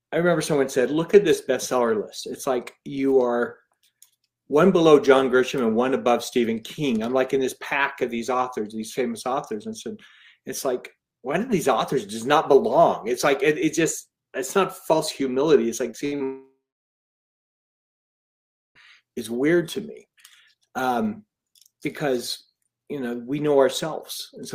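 At 15.91 s the audio picks up a brief smear lasting under 40 ms, a small wobble where the sound seems to stretch for an instant before carrying on. This is short concealed packet loss: about 20 ms of audio never reached the decoder in time, and the receiver bridged the hole by extending what came just before, drawing on its pitch or on shaped noise, then blending back into the real signal.

From 16.05 to 16.14 s the sound turns into a short held buzz or hiss that sags in level before the audio jumps ahead. That is a burst of packet loss. Roughly 60 ms went missing in a row, so the receiver kept repeating the last sound and turned it down as the gap went on, and the part that was lost is simply skipped.

A second short concealed packet loss follows at 16.16 to 16.22 s. It is another quick smear covering about 40 ms of missing audio, filled the same way and folded back in.

Then, from 16.24 to 18.77 s, the sound briefly continues as a fading buzz or hiss and gives way to about 2.2 s of silence before the audio returns further on. 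Roughly 2.5 s is gone, most likely through a long network dropout. The receiver extended the last sound only briefly before giving up, and the stretch in between was never played.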